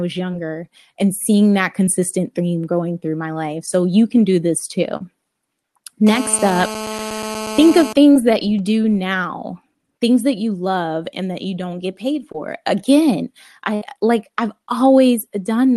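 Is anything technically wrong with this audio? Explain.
Yes, there are three kinds of fault in this speech.

Short concealed packet loss occurs at 0.31–0.34 s, 1.87 s, 3.66–3.68 s, 4.97–5.01 s (right after "you can do this"), 8.13–8.16 s (just before "that you do now") and 12.32–12.35 s (right after "you don't get paid"). Each time, roughly 10 to 30 ms of audio arrived too late. The decoder extended the preceding sound and then blended back in, so each event is heard as a tiny smear or wobble. On a spectrogram, each appears as a brief, unnaturally smooth patch.

A GSM phone buzz runs from 6.07 to 7.93 s. A nearby 2G phone in a call transmitted in bursts about 217 times a second, and the audio circuitry rectified that radio energy. The result is a hard, raspy buzz about 9 dB below the speech, nearly steady throughout the stretch and unrelated to the speech. On a spectrogram, it shows as evenly spaced horizontal lines at 217 Hz and its many harmonics. 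On a waveform, it shows as a regular pulse train.

A burst of packet loss hits at 13.75–13.82 s. About 60 ms in a row went missing, which is too long to conceal cleanly. The receiver held the last sound and faded it, producing a brief buzz or hiss. Speech then resumes slightly further on, with that piece skipped. On a spectrogram, this looks like a smeared, decaying block with a cut at the resumption point.

The call codec's high-frequency limit near 12 kHz is also visible on a spectrogram, and it fits an Opus stream at about 32 kbps.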